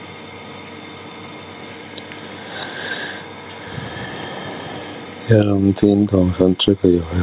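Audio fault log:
throughout: gain pumping. The swing is around 10 dB. Loud and soft parts of the speech sit close together in level, so the sound is squashed. The likely cause is input gain set far too high, with a fast limiter or compressor pulling it down on each peak and letting go in the gaps. Nothing is heard above 4 kHz, which fits a narrowband telephone codec on the call path.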